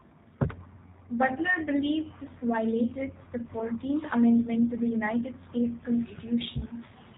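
From the start and throughout, the speech carries plainly audible G.729 codec damage: the sound is rebuilt from a vocal tract filter, a pitch predictor and sparse pulses in each 10 ms frame, which fits an 8 kbit/s stream. Nothing above 4 kHz passes, and the voice sounds rough and slightly synthetic. This steady narrowband roughness sets it apart from an isolated dropout.

From 2.38 to 2.45 s there is VoIP packet loss concealed by the speech codec. About 30 ms of audio went missing, and the decoder stretched its last pitch and filter into a fading sound. Unlike a plain gap or click, the sound smears on, and it stays weak briefly after the loss ends.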